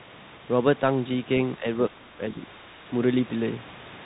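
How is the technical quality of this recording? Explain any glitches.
The speech drops out in two places, both likely caused by speech suppressed in double talk. From 1.58 to 1.64 s the level dips slightly, a few decibels. From 1.9 to 2.36 s it falls much further, at worst by about 25 dB, chopping the speech for roughly a third of a second. The echo canceller, hearing the far side talk at the same moment, apparently mistook this talker for loudspeaker echo and turned the outgoing signal down. The lowest bass is filtered out, as expected from a call microphone path.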